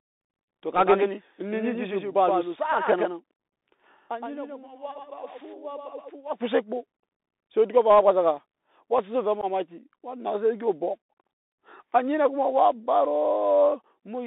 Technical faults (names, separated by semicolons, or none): Bluetooth CVSD headset codec; doubled audio track; unconcealed Bluetooth headset packet loss